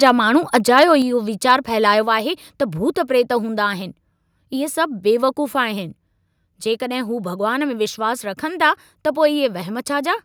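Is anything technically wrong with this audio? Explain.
Yes. At 0.03 to 0.1 s, 0.56 to 0.84 s and 1.5 to 1.52 s the speech shows microphone overload. The input gain was most likely set too high, driving peaks up to about 4 dB past the converter's limit and flattening their tops. This gives the loudest syllables a harsh, crackling edge, worst in the longer middle burst.

At 1.02 s the microphone volume steps down. The input level was likely reduced in a single jump of about 4 dB after the distorted peaks, so the speech and the background suddenly become quieter at once, without a gradual fade.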